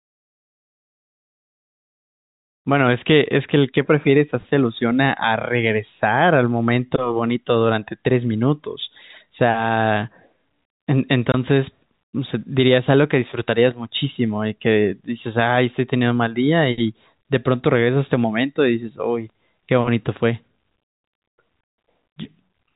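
At 11.32 s the speech drops out for 20 ms, a gap that fits a single lost packet. This is packet loss filled with silence: the receiver played silence in its place, so the hole has abrupt edges. The narrowband G.711 telephone coding around it stays intact.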